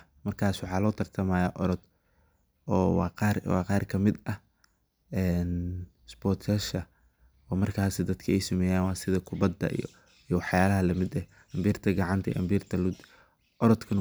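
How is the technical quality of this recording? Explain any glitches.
The technical quality holds up, and there are no glitches to explain.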